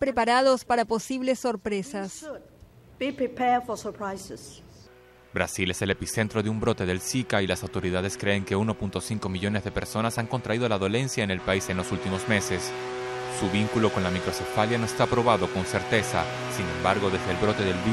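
No technical faults can be heard anywhere in the audio.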